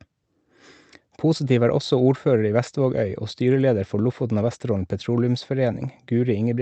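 No technical faults are audible.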